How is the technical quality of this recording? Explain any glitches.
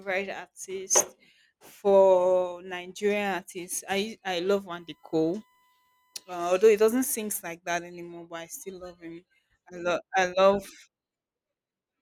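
There's one glitch here: from 4.75 to 6.75 s, after "artists I I love" and clearing just before "doesn't sing like that", a faint steady 1 kHz tone sits well under the speech. That's USB whine, the bus's 1 ms frame timing leaking into the audio through power or ground as a fixed-pitch hum.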